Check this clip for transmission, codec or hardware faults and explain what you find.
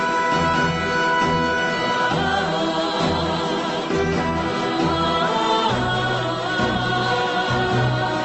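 No faults found.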